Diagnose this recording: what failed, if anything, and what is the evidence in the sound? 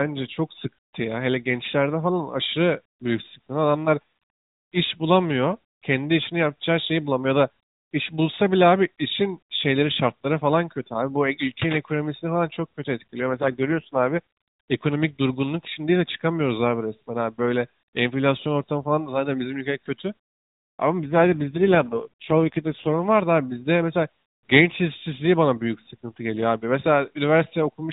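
The failure is an AMR rate drop at the codec stage, triggered from the network side. From 13.29 to 14.19 s and again from 21.04 to 23.00 s the speech turns buzzy and synthetic. This fits a switch from the AMR-NB 12.2 kbps mode down to 4.75 kbps, with the freed bits spent protecting a weak radio link. On a spectrogram the 4 kHz ceiling holds and there is no dropout, but the harmonics blur into coarse, smeared bands until the rate recovers.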